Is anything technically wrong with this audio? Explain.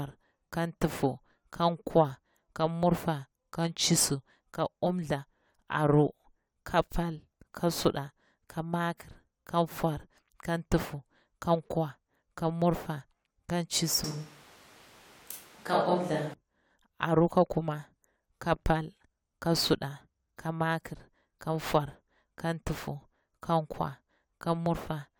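Yes. From 14.04 to 16.34 s, just after "kan murfa kan", there is a switch to a distant microphone, likely because the close microphone's feed dropped out. The speech turns suddenly roomy and hollow, thinner in the bass, at about the same level, with background noise rising to roughly 25 dB below the speech, then snaps back.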